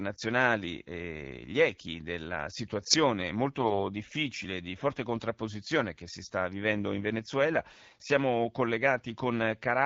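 From 3.60 to 3.82 s, right after "gli echi della situazione" and before "difficile di forte contrapposizione", the voice turns hoarse, scratchy and gargly while keeping roughly its pitch and level. These are AMR bit errors. On a weak link, around 4 percent of the less protected bits in the AMR-WB frames arrived flipped, yet passed the check on the key bits. The excitation pulses were misplaced and the fine pitch, gain and spectral values were wrong across 11 20 ms frames.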